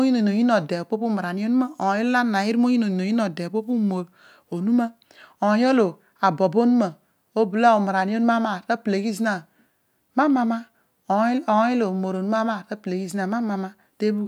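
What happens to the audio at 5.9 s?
Nothing goes wrong at 5.9 s; the speech runs on intact through that moment.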